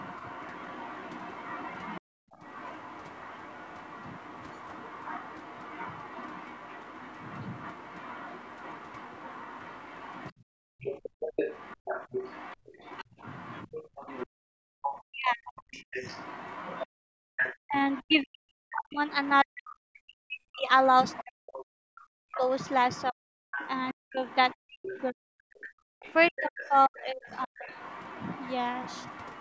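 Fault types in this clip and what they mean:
Other side's voice leaking through: A second voice sits roughly 20 dB below the talker from the start to about 19.3 s and again from 20.8 s to the end, likely loudspeaker echo the canceller missed. Unlike the two dropout faults, this adds sound rather than removing it.
Background gated by the echo canceller: The room sound, not the talker, is pulled down hard, by about 32 to 37 dB at its deepest, in short holes at 2.01, 10.32 to 12.68, 14.27 and 16.87 s. The ambience vanishes and returns, leaving a dead, pumping silence.
Speech suppressed in double talk: The talker's own voice dips by as much as about 40 dB or breaks into pieces around 15.0 to 15.8 s, and over about five seconds between 17.65 and 27.7 s, likely because both sides spoke at once. Here the speech itself drops out, not just the background.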